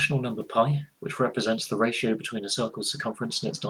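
No technical faults occur anywhere in the speech, with only the room's own background noise audible at about 45 dB below it.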